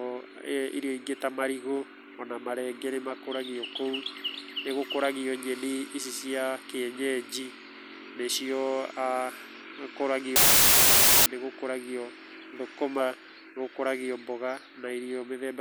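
From 10.36 to 11.26 s the speech collapses into a loud, harsh hiss, a wrong sample width fault, just before "nĩgũkũragio thũkũma nĩgũkũragio". Audio stored as 16-bit samples is being read as packed 24-bit ones, so each value straddles mismatched bytes and the playback runs 1.5 times too fast, raising the pitch. On the waveform the section jumps sharply in level, while a spectrogram shows broadband noise with faint, upshifted speech harmonics buried inside.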